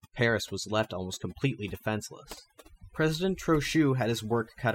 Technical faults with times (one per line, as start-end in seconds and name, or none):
0.00-4.75 overdone noise removal